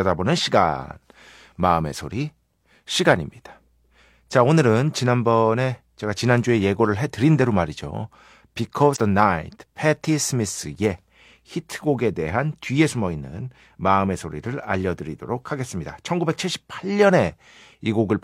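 At 8.92 s the speech is broken by damaged data in a compressed stream. The disturbance lasts until 8.98 s, about 60 ms. Part of the encoded data at that point was wrong. Bytes may have been lost, zeroed, overwritten, or mixed with other material. The decoder could not read those frames correctly. It lost its place and searched for the next valid frame header before normal playback resumed. The result is a brief break in the speech.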